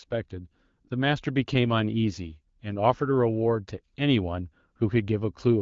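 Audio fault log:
No faults are present in this speech, which carries the band-limited, lightly coded character of AMR wideband (HD Voice) at a rate that sounds consistent with around 12.65 kbit/s, where the speech remains clear.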